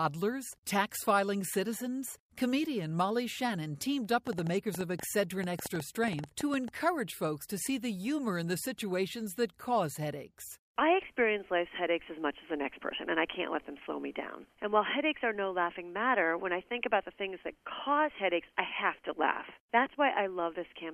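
From 4.27 s to 6.69 s a train of clicks ticks and pops over the sound, roughly twenty sharp, near-identical pulses arriving about 8.3 times per second at an uneven pace, with peaks standing well above the surrounding audio. The clicks keep coming regardless of what the sound is doing. The likely cause is an outside source repeatedly injecting a brief pulse into the signal path, such as interference from nearby equipment or a faulty connection or power supply.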